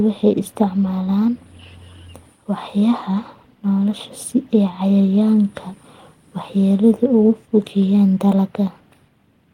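A speech recording with no audible technical faults anywhere in it.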